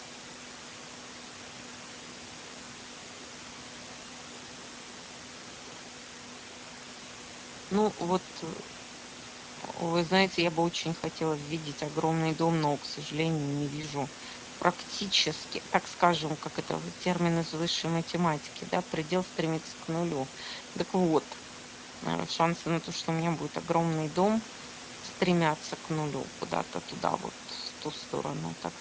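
Throughout, the speech sounds hoarse and plainly noisy, with a hissy, noise-like quality in the upper range rather than crisp detail. This is Speex codec damage at a setting consistent with about 16.8 kbps. The excitation gets few bits, and the band from 4 kHz to 8 kHz is only a shaped noise fill.

From 13.81 s to 13.85 s, the sound briefly smears into a buzzy tone or coloured noise that fades, then takes a moment to firm up again. This is VoIP packet loss concealed by the speech codec, consistent with a single lost 20 ms frame. The decoder extrapolated from its last pitch and filter at reduced gain.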